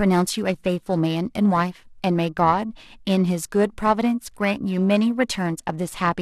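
Periodic clock jitter runs through the whole of this speech recording, from the first syllable to the last. The converter's sampling clock is being nudged back and forth at a steady rate of around 1 kHz, so each frequency in the voice picks up copies spaced roughly that far above and below it. The upper harmonics and sibilants suffer most, giving the speech a grainy, metallic edge that drops away in the pauses.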